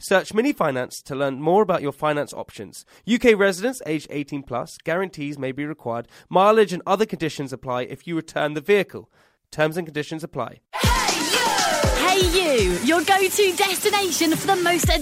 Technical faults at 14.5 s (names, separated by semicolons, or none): none